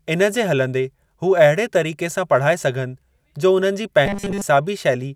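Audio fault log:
4.06–4.42 s, robotic sound from repeated short buffers: the voice turns into a rigid, metallic buzz pitched at 200 Hz that still loosely tracks the speech. This is likely from audio arriving too slowly, so a 5 ms slice is replayed over most of this stretch while the real signal is skipped.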